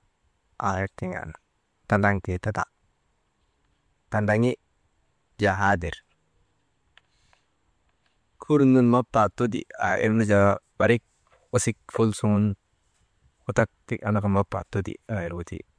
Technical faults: none

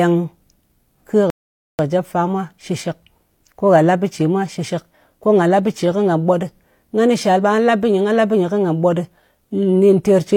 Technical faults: rebuffering stall

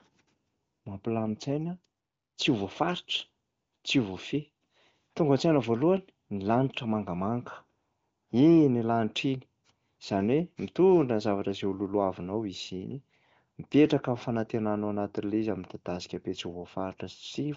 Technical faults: none

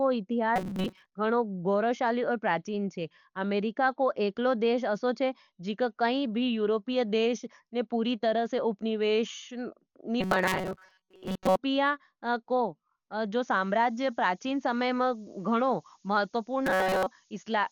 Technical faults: Dolby Digital compression; robotic sound from repeated short buffers; low bit depth with noise shaping

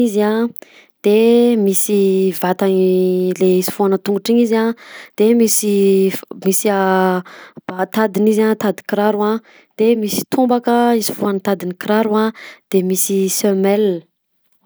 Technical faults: none

